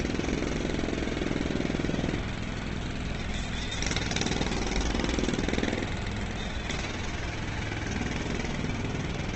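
The clip of everyday sound carries Opus compression damage from start to finish, and it is heavy. Nothing is present above 8.4 kHz, so the top end is cut off and dull, and tones come out rough, grainy and noise-filled. That graininess separates it from MP3, which would leave swirling, watery holes in the spectrum. The cause is likely a low-rate Opus encode in its music mode, and the damage fits a rate around 12 kbps.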